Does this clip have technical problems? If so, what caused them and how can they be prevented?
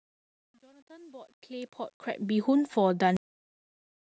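Yes. The speech opens with a fade-in that suffers truncation distortion. From 0.0 s to about 2.42 s, and worst from 0.0 to 1.67 s, the quiet early part of the fade sounds gritty. The fade stage kept too few bits and added no dither, which fits roughly 10-bit resolution, so the low-level waveform collapses into coarse steps. Unlike ordinary background noise, the grit follows the signal and disappears as the level rises. The fade itself is smooth by 2.42 s. Preventing this means running the fade at high internal resolution and adding dither before any word-length reduction.

There is also a cut-off end. At 3.17 s the audio stops in the middle of a sound and drops straight to digital silence, which lasts until the clip ends. There is no decay and no tail, which separates it from a deliberate fade-out or a natural pause: the level falls from full to nothing instantly rather than tapering. The final buffers were never written or played out. 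Preventing this means flushing and draining all pending buffers before closing the stream or file.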